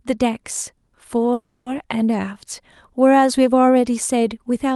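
At 1.33 s the speech stops advancing and its last sound stretches into a fading buzz. At 1.69 s the speech resumes exactly where it left off, with nothing lost. This is a call audio freeze. Packets were likely held up in transit, so the jitter buffer ran dry and the receiver filled the 330 ms gap by extending that final sound. Everything afterwards arrives that much later, heard through a top end stopping near 12 kHz, which fits the Opus codec.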